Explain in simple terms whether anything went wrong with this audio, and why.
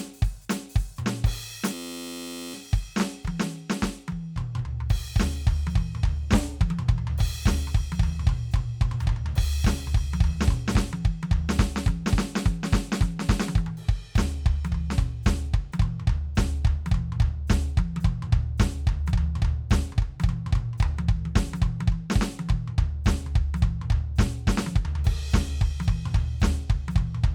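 A system hang loop occurs from 1.74 to 2.54 seconds. The computer briefly froze, but the sound hardware kept replaying the last small chunk of music still in its memory, a slice just 11.6 ms long, which fits a 512-sample buffer. Because that tiny piece repeats dozens of times in a row, about 86 times per second, the music is replaced by a steady, flat buzz for nearly a second.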